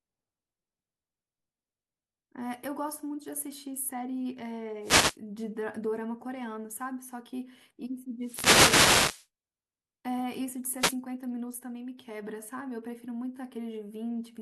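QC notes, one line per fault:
4.82–5.17 s, 8.20–9.27 s and 10.79–10.96 s: wireless microphone noise hits. Each is a short swish of static as the FM radio link fades, probably from reflected signals cancelling. Receiver hiss rises over the speech. On a spectrogram, broadband noise fills the gaps between the speech harmonics. On the waveform, the floor between syllables visibly thickens.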